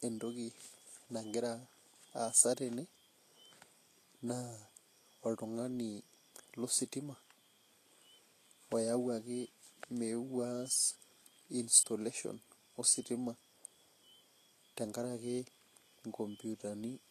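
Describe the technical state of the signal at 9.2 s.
At 9.2 s the speech sounds hissy and grainy, with roughened tones and softened consonant attacks, and nothing is present above 14.2 kHz. This runs through the whole clip and is likely Vorbis compression at a low bitrate, around 36 kbps, coarsely quantising the treble into noise-like texture.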